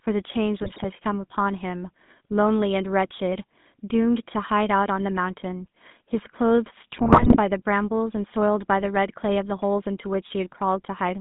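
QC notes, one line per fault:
throughout: GSM full-rate codec, buzzy, gravelly speech confined to roughly 150 Hz to 3.6 kHz, from a 13 kbps vocal-tract model driven by coarse, regularly spaced excitation pulses.
0.62–0.87 s and 6.96–7.38 s: GSM bit errors, squawks, pops and gargling as corrupted filter, pitch and gain values distort the spectrum and level frame by frame.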